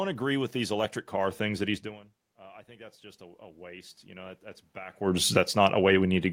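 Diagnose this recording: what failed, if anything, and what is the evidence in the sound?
Automatic gain rising in call processing. After "electric car things that", from 1.64 to 5.04 s, voice and room noise swell together by about 8 dB as gain chases a quieter input.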